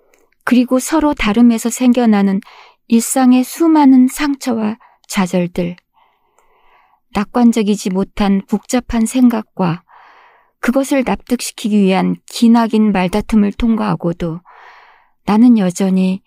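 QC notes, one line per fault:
No faults heard anywhere in this speech recording.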